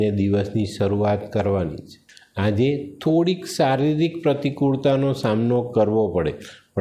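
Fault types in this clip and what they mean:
Nothing stood out as a technical problem on listening to this clip.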